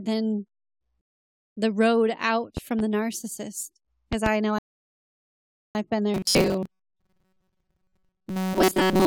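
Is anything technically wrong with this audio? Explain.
Yes, there are several faults in this speech clip.

From 1.01 to 1.57 s there is a rebuffering stall: the player ran out of downloaded audio and had to wait for more. The speech drops to silence for about 0.56 s, then picks up exactly where it left off with "the road out". Nothing is skipped. A second, longer stall runs from 4.59 to 5.75 s and adds about 1.16 s of dead air before playback continues at the point where it stopped.

Two loud pops sit on top of the speech. The first falls between 2.57 and 2.82 s, after "the road out" and before "the narcissist", and peaks around 5 dB above the signal. The second falls between 4.13 and 4.29 s, just after "the narcissist", and is much harsher at about 15 dB above. Each is a pair of sharp clicks in quick succession, and the speech carries on underneath. A sudden voltage step, likely from a switch, connector, static or a driver glitch, was shaped into short pulses by the circuitry after it.

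From 6.14 s to the end the speech has robotic sound from repeated short buffers. Audio was arriving too seldom, and the gaps were likely filled by looping the last few milliseconds over and over while most of the real material, roughly two-thirds, was skipped. Repeating that tiny segment imposes a fixed 188 Hz buzz, which fits a loop about 5.3 ms long, so the voice turns rigid and metallic and only loosely follows the words.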